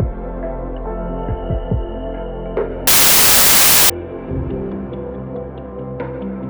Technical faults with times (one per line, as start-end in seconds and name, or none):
2.87-3.90 samples built from the wrong bytes